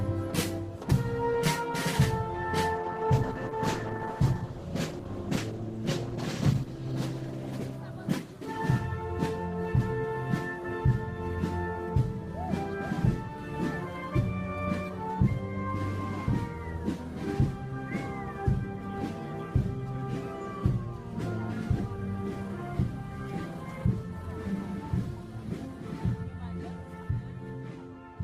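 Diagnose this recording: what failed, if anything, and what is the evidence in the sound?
Call bitrate drop, 2.76 to 9.35 s, at the codec stage. The sound coarsens and loses its top end, bottoming out for about 3.8 s, which fits a fall from roughly 32 kbps to 11 kbps. A shrinking bandwidth estimate starved the encoder of bits until it recovered.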